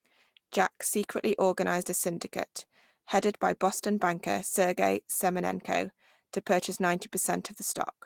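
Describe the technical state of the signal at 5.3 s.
The signal at 5.3 s is intact, with no audible fault at that point.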